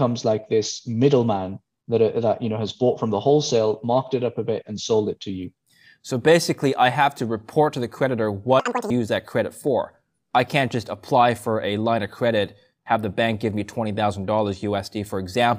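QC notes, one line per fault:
8.60–8.90 s, audio read two samples at a time (double speed): sample pairs taken as one frame, so the sound plays at double speed and jumps exactly an octave at 2.0x.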